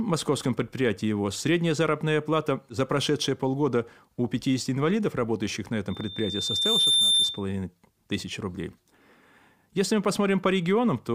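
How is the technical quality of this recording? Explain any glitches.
The recording has one clear fault, a loudspeaker feedback squeal, from 5.90 to 7.45 s, just after "инвалидов работающих на". The microphone picked up its own loudspeaker, so a 3.6 kHz tone kept recirculating and swelled over roughly a second into a piercing squeal above the speech.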